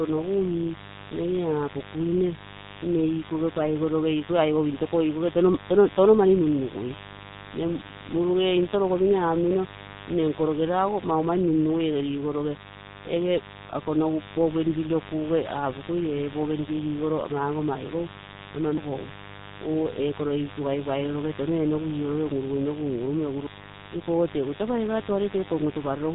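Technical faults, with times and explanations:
Throughout, mains buzz: a steady, raspy buzz sits under the speech, roughly 15 dB below it. Sharp switching spikes twice per 50 Hz cycle, from a dimmer, rectifier or unshielded line, build a dense ladder of harmonics reaching several kilohertz.
Throughout, G.723.1 codec: nothing above 3.8 kHz survives, so the speech is muffled and hoarse, with smeared consonants. The heavy damage fits a G.723.1 low-bitrate stream near 6 kbit/s, whose 30 ms frames and slow voice-model updates blur rapid changes.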